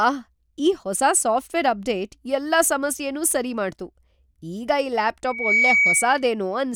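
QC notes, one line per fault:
5.24–6.28 s, loudspeaker feedback squeal: just after "ಈಗ್ ಈ" a single tone near 2.3 kHz rises out of the speech, swelling over roughly a third of a second until it sits a few dB above the speech, and it holds until about 6.28 s. The microphone is hearing the loudspeaker it drives, and at this one frequency each trip around that loop comes back louder than it went in, so the tone feeds itself until the loop is broken.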